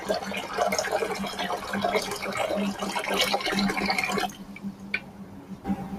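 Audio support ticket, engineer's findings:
Speech-tuned noise suppressor left active on non-speech material, treating sustained content as noise; gain swings around 10 dB throughout, so attacks pass while held sound and tails pump and thin.

Sound cut by the noise suppressor, 4.32 to 5.65 s: suppressor classifies this sound as noise and pulls it down by up to about 6 dB, sinking the level.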